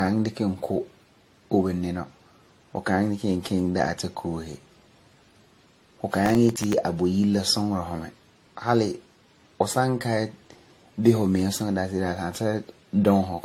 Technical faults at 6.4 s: generation loss; processor overload crackle

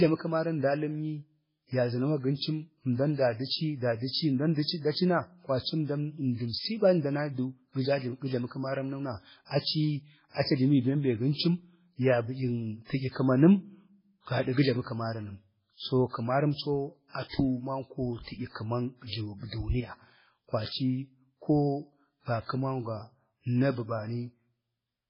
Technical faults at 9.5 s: MP3 compression; pre-echo

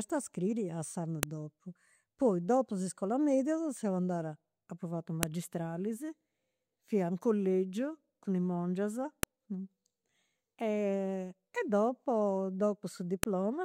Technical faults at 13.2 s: file header played as audio

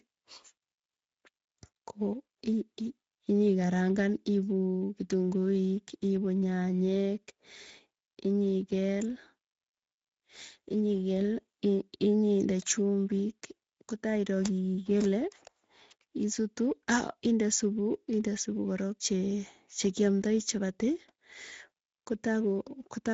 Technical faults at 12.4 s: Speex codec

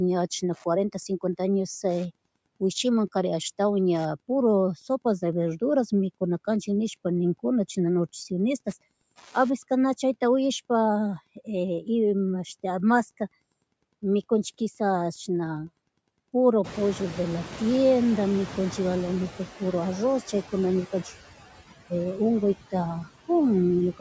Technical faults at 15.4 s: Wi-Fi interference; noise suppressor artifacts

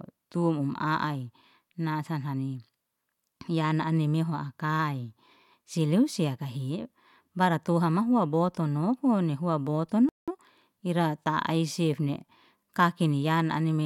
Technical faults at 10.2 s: playback stall; time-compressed catch-up

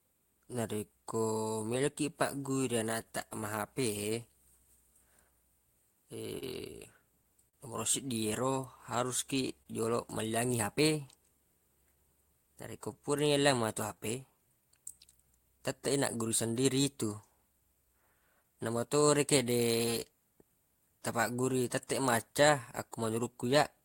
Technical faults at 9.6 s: clock drift between sender and receiver; repeated timing corrections; short stall from a late packet

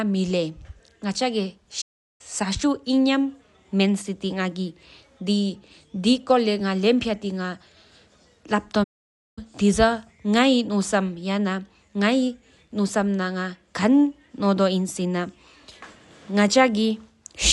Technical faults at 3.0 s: Dolby Digital compression

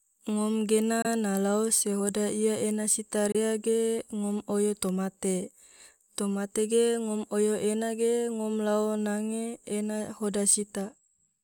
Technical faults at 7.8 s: none

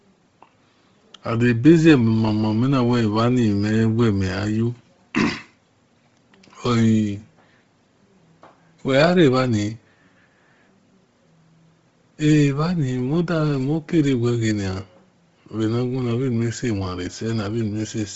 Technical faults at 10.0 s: Bluetooth LC3 compression

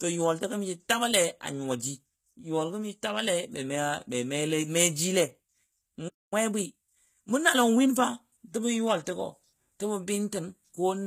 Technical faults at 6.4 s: HE-AAC compression; playback stall; time-compressed catch-up

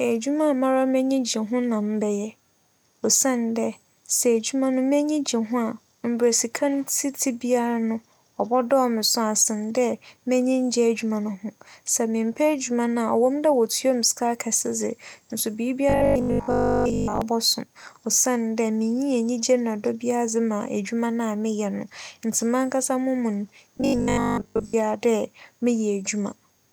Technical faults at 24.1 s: robotic sound from repeated short buffers

